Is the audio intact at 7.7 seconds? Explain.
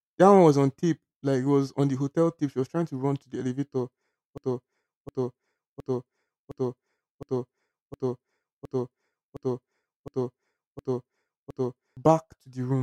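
No. At 7.7 s a broken-record loop is playing: just after "run to the elevator", one 0.71 s fragment repeats back to back eleven times from 4.38 to 11.97 s, replacing the audio that should be there. A stalled player or stream was likely resending its last held fragment.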